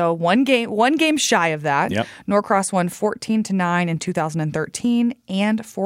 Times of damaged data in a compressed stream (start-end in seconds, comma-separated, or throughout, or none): none